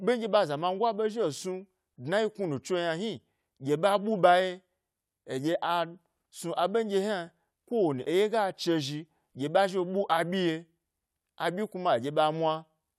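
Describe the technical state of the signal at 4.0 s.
At 4.0 s the speech signal is intact, with no audible technical fault at that moment.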